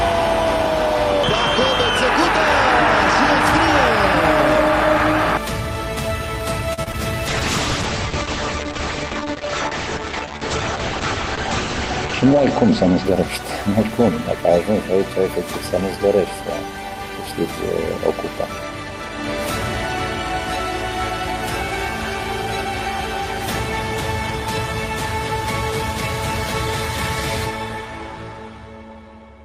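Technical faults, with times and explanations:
6.73 to 6.79 s: short stall from a late packet. A packet arrived late, so the jitter buffer emptied and the last sound was held about 41 ms before resuming without loss.
6.83 to 6.88 s and 6.92 to 6.95 s: short concealed packet loss. Two packets of about 20 ms never arrived; the receiver extrapolated the preceding sound, giving brief smears before blending back.
7.28 to 15.23 s: call bitrate drop. The bandwidth estimate fell and the encoder went from 64 to 9 kbps, holding the low rate roughly five seconds, with audio bandwidth cut from 20 kHz to 8 kHz, so the sound turns muffled and rough.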